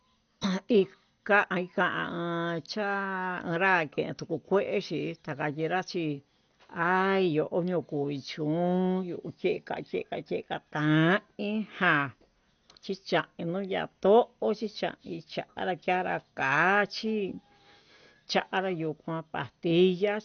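From start to finish the speech carries plainly audible codec damage: it sounds dull and muffled, with a gurgling, granular roughness. The likely cause is MP2 compression at a rate that fits roughly 48 kbps, starving the upper sub-bands of bits so they are shut off and the remaining bands are coarsely quantised. A spectrogram shows nothing above 6.5 kHz, with patchy, flickering blocks of energy below that edge.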